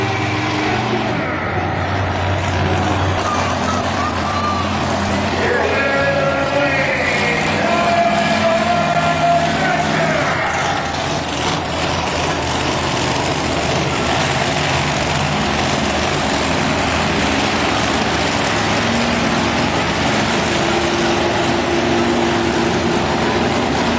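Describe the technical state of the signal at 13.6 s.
At 13.6 s the signal is intact, with no fault at that moment, only the steady band limit of the WebRTC call path, which leaves nothing above 8 kHz, as expected from a G.722 wideband codec.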